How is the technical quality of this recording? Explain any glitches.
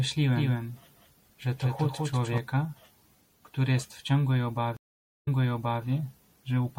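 The recording has clear technical faults: a coding artefact throughout, a doubled track early on, and a dropout with a jump backwards near the end.

Throughout the clip the speech has a watery, swirling quality, with metallic chirps on s sounds and smeared consonant onsets. This is likely MP3 compression at a low bitrate, around 64 kbps. With too few bits, the encoder drops the high band and switches weak frequency lines on and off frame to frame.

From 0.36 to 2.38 s a doubled audio track is audible. A second full-band copy of the speech trails the original by about 200 ms and sits about 5 dB lower. It has no reverberant tail, and it begins and ends abruptly. The likely cause is a second capture path or an edit holding two misaligned copies.

A stream reconnect occurs at 4.77 s, just after "który jest w ciągłej". The audio cuts to 0.5 s of silence, then resumes 0.58 s earlier, repeating material already heard. 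The first moments fade in as a fresh decoder starts mid-stream, and the disturbance settles by 5.84 s.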